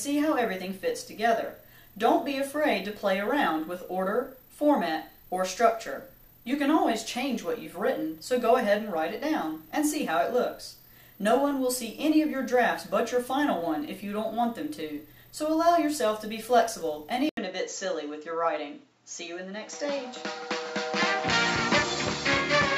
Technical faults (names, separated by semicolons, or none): input switched to a poorer device